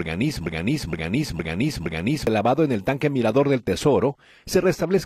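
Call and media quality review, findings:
Broken-record loop, 0.47–2.27 s: a fragment of about 0.46 s plays four times back to back, identical each pass. Likely a stalled player, encoder or stream resending its last held buffer. Audio due in that span is lost.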